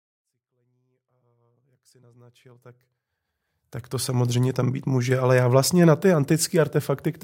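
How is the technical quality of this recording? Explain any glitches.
No glitches turn up in this speech recording at all; the level just eases in gently from the very beginning and reaches full volume at about 4.35 s, which is simply a smooth editorial fade-in.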